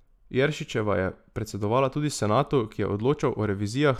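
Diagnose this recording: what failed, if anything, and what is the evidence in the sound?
Nothing failed in this recording, and there is no evidence in the sound of any fault.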